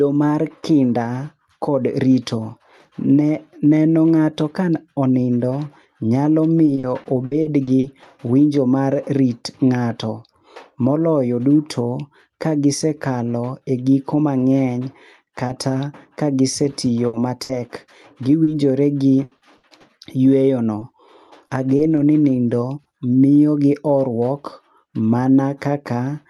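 Speech sent over a call link whose top end stops near 12 kHz, consistent with an Opus path, has two kinds of fault. Repeated packet loss (robotic sound) runs from 6.65 to 8.07 s, with nine holes up to 60 ms each, about a fifth of the stretch. It recurs from 17.07 to 22.87 s, with twelve holes up to 80 ms. These patched gaps chain into choppy sound with pieces missing rather than a single smear. A short concealed packet loss at 15.47 to 15.51 s fills one 20 ms hole by extending the last sound. It is heard as an isolated brief wobble, not a repeating pattern.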